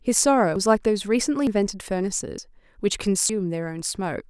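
The speech jumps abruptly at 0.56, 1.47, 2.38 and 3.29 s, losing about a tenth of a second each time with the two sides butted together. That's likely audio missing between chunks: one-second blocks, each losing a slice at the handover.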